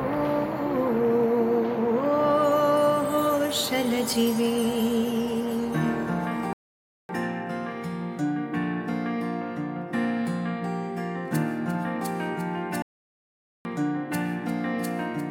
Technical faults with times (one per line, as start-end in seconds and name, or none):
6.53-7.09 playback stall
12.82-13.65 playback stall